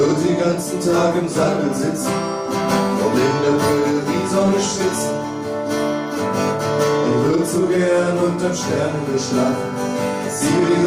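No technical faults can be heard anywhere in the recording, with the signal holding steady and intact throughout.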